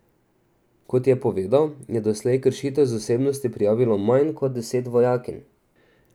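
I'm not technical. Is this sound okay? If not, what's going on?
No. There is a drift correction step from 4.23 to 5.47 seconds: for just over a second the speech runs about 5.7% fast and its pitch rises by roughly a semitone, then both snap back to normal. The likely cause is software keeping two devices' clocks in step, which briefly sped up playback to use up audio that had piled up in its buffer, raising speed and pitch together.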